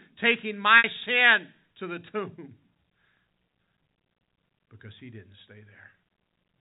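At 0.78 s, packet loss with pitch repetition cuts out about 60 ms of speech, until 0.84 s. The receiver fills the gap by repeating the last pitch period. That held, buzzy tone fades over about 50 ms, dips briefly toward silence, then cross-fades back into speech.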